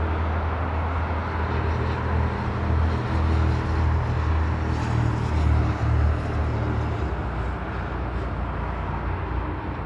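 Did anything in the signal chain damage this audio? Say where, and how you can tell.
No, nothing in the signal chain has audibly damaged this recording of sounds. None of the stages from wiring and conversion through to storage and playback leaves any audible trace here.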